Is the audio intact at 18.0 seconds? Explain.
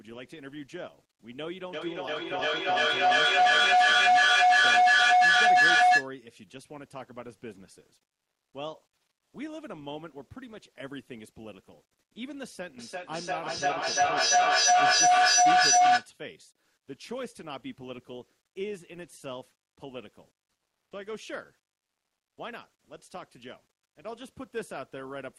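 Yes, the speech at 18.0 s comes through intact, with no fault at that moment.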